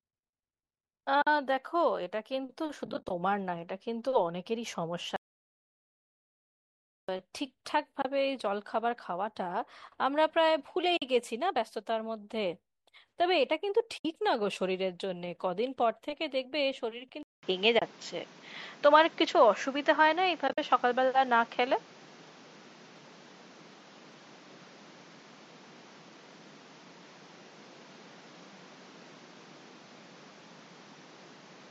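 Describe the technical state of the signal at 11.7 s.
At 11.7 s the speech is intact, with no fault in the signal at that moment.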